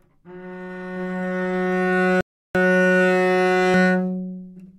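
A recording of sounds, with two faults. From 0.96 s to 3.74 s there is a doubled audio track. A second full-band copy trails the original by roughly 0.7 s, at about the same level. It is dry, with no decay, and starts and stops abruptly. The likely cause is a second capture path running late, or an edit leaving two copies out of step. At 2.21 s a rebuffering stall occurs. The sound drops to silence until 2.55 s. The player had run out of downloaded audio and waited for more. Playback then resumes exactly where it stopped. Nothing is lost, but 0.34 s is added.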